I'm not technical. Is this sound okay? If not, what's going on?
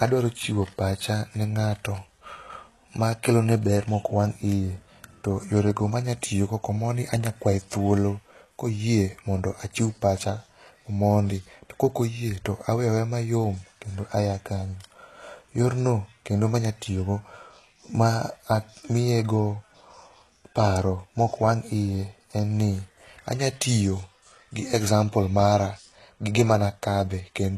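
No. HE-AAC compression damage runs through the whole clip, from start to finish. The speech is squeezed into very little data, likely by the HE-AAC codec, which stores only the lower part of the sound properly and fakes the treble by copying lower bands upward. That copied top doesn't match the real voice, so s sounds come out gritty, lispy or metallic, and nothing at all is left above about 12.4 kHz.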